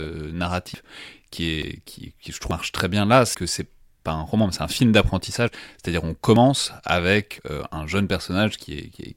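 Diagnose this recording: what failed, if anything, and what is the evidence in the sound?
The driver likely let capture buffers overrun, a dropped buffer (overrun). Speech chunks of roughly 50 to 150 ms vanish, leaving jumps in the sound at 0.74, 1.63, 2.51, 3.34, 5.48, 6.36 and 7.38 s.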